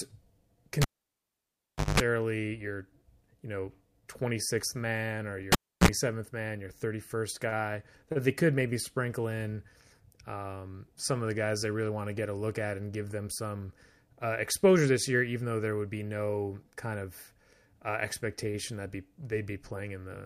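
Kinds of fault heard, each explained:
Cable pulled and plugged in: a live lead comes out and goes back in, giving a pop, near silence, mains buzz as the tip touches, then a pop. A 1.13 s gap with 50 Hz buzz, then 0.31 s with 60 Hz. The buzz separates it from a plain dropout.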